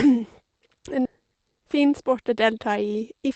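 At 1.05 s the speech skips ahead: roughly 0.7 s of audio was discarded, either on the way or by an overflowing jitter buffer with later packets already queued, and the two sides are spliced almost directly with no filled gap, so the sound lurches forward abruptly.

From 1.21 s to 2.54 s a jitter buffer speed-up follows, as the receiver trims excess buffered delay by cutting short pitch-period segments repeatedly. Speech runs about 8% fast at unchanged pitch, about 100 ms shorter overall, and sounds hurried, over an Opus path whose top end stops around 8 kHz.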